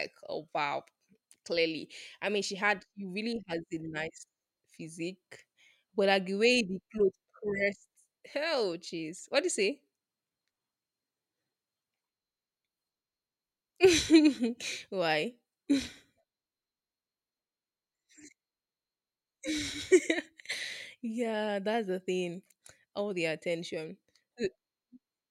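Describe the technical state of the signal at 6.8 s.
At 6.8 s the speech signal is intact, with no audible technical fault at that moment.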